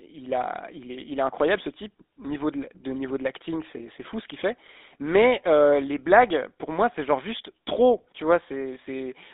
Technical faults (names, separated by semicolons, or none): GSM full-rate codec